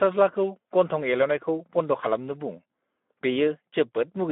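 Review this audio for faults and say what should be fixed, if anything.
The whole clip carries Speex codec damage, start to finish. The speech sounds noisy and hoarse, because this CELP coder is running short of bits to describe the excitation, and the grit level points to a lowish setting around 11 kbps. On top of that, the band is squeezed to roughly 200 Hz to 3.6 kHz, with nothing above 3.8 kHz, so it has that boxed-in telephone feel. To prevent it, capture or re-source the audio at full bandwidth, or use a modern wideband codec like Opus at a healthier bitrate.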